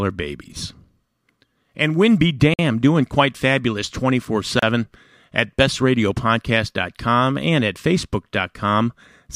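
Speech drops briefly to silence twice, for 51 ms at 2.54 s just before "doing quite fabulous" and for 31 ms at 4.59 s, then resumes, likely a Bluetooth stall.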